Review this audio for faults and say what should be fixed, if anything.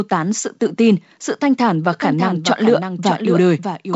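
From 1.93 s to the end, there is a doubled audio track. A full-band copy trails the speech by about 0.7 s. It sits about 5 dB lower and has no decay. A second, slower capture path is the likely cause. Keep one capture path and mute any duplicate feed.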